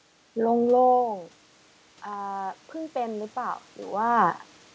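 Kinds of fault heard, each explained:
Automatic gain rising: from about 2.03 s to the end, the level reaching the microphone falls by about 19 dB, and the gain control responds by turning itself up gradually, so speech and room noise swell back together over a second or more rather than recovering at once. On the waveform the envelope drops, then climbs steadily. On a spectrogram the whole band, speech harmonics and noise floor alike, brightens in step below the 8 kHz ceiling.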